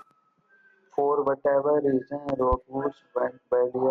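At 2.29 s, just after "whatever reason", a loud pop lands as two sharp thumps in quick succession, over by 2.56 s and peaking roughly 10 dB above the speech, which continues underneath. A voltage spike, likely from a switch, plug or static discharge, entered the signal path.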